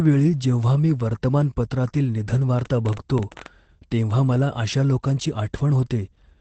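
Across the whole clip the speech sounds muffled, slightly hoarse and a little robotic, with nothing above about 8.4 kHz. This is Opus voice compression in its SILK mode at a wideband setting. The coder models speech with linear prediction and, short of bits, quantises the excitation coarsely, producing that buzzy roughness. The degree of damage fits a low rate of around 12 kbps in 20 ms frames.

From 2.59 to 3.47 s, between "वेळी जेव्हा मी वर्तमानपत्रातील" and "तेव्हा मला अशा लोकांची", a train of clicks ticks over the speech: about fifteen similar pops at an uneven pace averaging nearly 15 per second, peaking roughly 5 dB above the speech. Similar pulses at that density likely come from electrical interference or a faulty connection or power supply, not from anything in the recorded sound.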